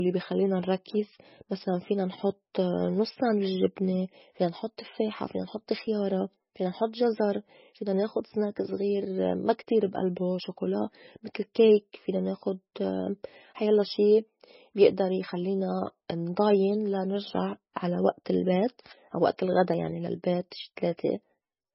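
The whole clip carries heavy MP3 compression, likely from a very low bitrate of around 17 kbps. Weak frequency lines flicker in and out, giving that watery, swirly texture, and consonant onsets smear.

At 5.87 s, right after "نحط تفّاحة فينا نحط", there's a tiny jump forward, and the same happens at 19.74 s between "البيت أو وئت الغدا" and "يعني للبيت شي". Both are likely a dropped buffer (overrun), where a few milliseconds were lost and the edges were spliced together without any gap.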